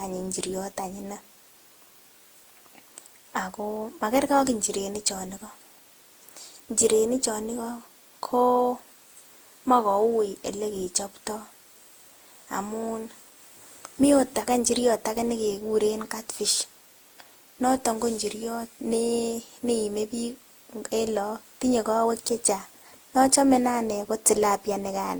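Throughout the speech there is generation loss: a swirly, hollow smear over the whole voice, with consonant attacks blurred and a watery texture that sounds worse than a single encode at a moderate rate would. The likely cause is repeated lossy re-encoding, around ten passes, with character that points to Opus at about 64 kbit/s. Unlike a single low-bitrate encode, the artefacts feel layered, because each pass quantised on a shifted frame grid and the noise accumulated.

At 3.77 s and again at 20.96 s there is a single sharp click, each heard as a thin vertical line across the spectrum. These are dropped samples, likely caused by a gap of well under a millisecond where the waveform jumps straight to a later value. No sound is audibly missing, which separates this from a dropout or a packet loss gap. Because each click is isolated, it also differs from the steady crackle of repeated buffer underruns.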